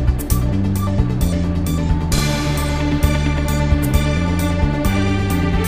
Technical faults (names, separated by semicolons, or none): chunks out of order